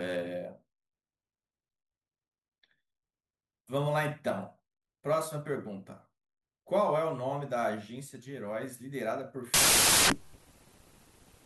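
From 9.54 s to the end at 11.46 s, a wrong sample width fault: the audio is read three bytes per sample when it was written with two, which fits 16-bit data read as packed 24-bit. Most samples mix mismatched bytes, so loud harsh noise buries the speech, which runs 1.5 times too fast and too high.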